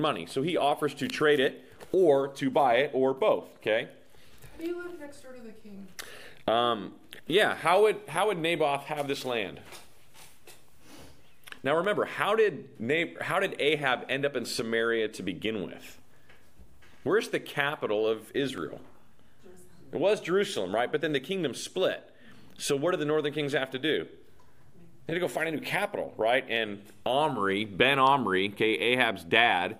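Three sharp, isolated clicks land at 11.85, 18.58 and 26.56 s, each a thin vertical line in the spectrum. They're most likely dropped samples: a fraction of a millisecond goes missing, so the waveform jumps abruptly without removing any audible sound.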